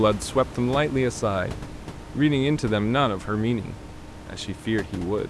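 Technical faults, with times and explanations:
No technical faults can be heard anywhere in it.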